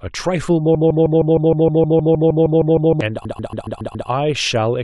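From 0.75 s to 3.01 s the speech falls into a broken-record loop. A piece about 156 ms long repeats exactly, back to back, fourteen times. The source likely stalled and kept resending its last fragment. The speech that belonged there is lost.

At 3.24 s repeated frames begin and last until 4.08 s. A block of about 139 ms plays again and again, six extra times. This fits a short run of compressed frames being written more than once. It sounds like a stutter and stretches the clip by about 0.84 s.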